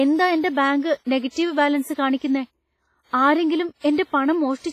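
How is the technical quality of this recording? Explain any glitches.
Pretty rough, honestly: the speech carries heavy codec damage from start to finish. The whole clip sounds washy and ringing, with a hiss that swells and fades along with the voice. That's likely WMA compression. Its long transform blocks smear quantisation noise across tens of milliseconds, and weak spectral detail gets dropped, which fits a low bitrate of around 24 kbps. There's also nothing above 15.5 kHz.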